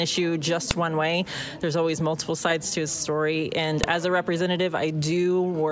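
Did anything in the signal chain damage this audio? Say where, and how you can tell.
Yes. There's a file header played as audio, a storage or joining problem: sharp snaps at 0.71 s and 3.84 s, each about 3 ms long. Those are WAV header bytes left in where pieces were spliced together, so they play back as raw samples and cut right through whatever the sound is doing.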